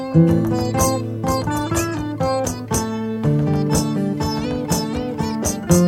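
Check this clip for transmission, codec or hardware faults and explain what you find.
No transmission, codec or hardware problems can be heard anywhere in the signal.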